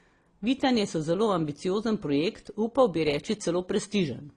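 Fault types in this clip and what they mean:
Transcoding between lossy codecs, throughout: the speech has nothing above 11.5 kHz and carries two layers of coding damage at once, the different artefacts heard together. This is likely an AAC-LC encode that was re-encoded to Opus, both at rates that sound like around 32 kbit/s. The second encoder wastes bits reproducing the first one's artefacts, adds its own, and the low cut-off survives.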